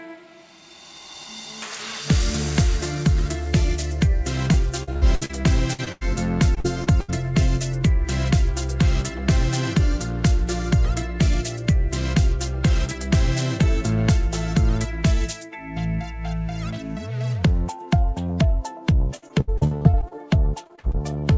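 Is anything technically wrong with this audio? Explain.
Yes, the audio has packet-loss damage from a call connection, heard through a wideband call codec that leaves nothing above 8 kHz.

Repeated packet loss (robotic sound), at 4.52–5.31, 6.55–7.10, 19.16–20.17 and 20.64–21.03 s: lost packets were patched by extending the last sound, about a quarter to a third of each stretch, giving a choppy result with pieces missing.

Bursts of packet loss, at 5.73–5.80 and 5.92–6.03 s: roughly 60 and 80 ms went missing, filled by a fading continuation that buzzes or hisses before the audio resumes further on.

Short concealed packet loss, at 5.84–5.88 s: a 20 ms hole was covered by a continuation of the previous sound and blended back, producing a brief smear.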